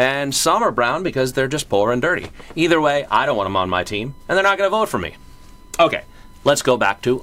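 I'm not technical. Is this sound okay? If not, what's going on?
No. From 3.31 s to the end there is USB whine, a steady high-pitched tone at 1 kHz sitting well below the main sound. The USB connection draws power in regular 1 ms bursts. That pulsing leaks into the audio through the power or ground wiring.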